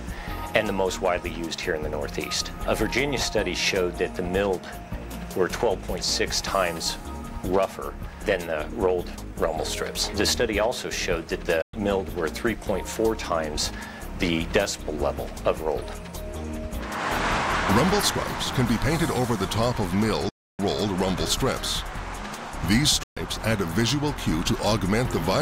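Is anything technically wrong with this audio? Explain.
Yes. The audio drops out completely three times: from 11.62 to 11.74 s, from 20.29 to 20.59 s, and from 23.03 to 23.17 s. These gaps last about 112 ms, 299 ms and 131 ms. The likely cause is a Bluetooth dropout, where data packets missed the headphones' deadline and were discarded, leaving silence until good packets arrived. What sets this apart from a stall or buffer hiccup is that the sound does not pause and pick up where it stopped. It resumes further along, as though it kept playing through the gap.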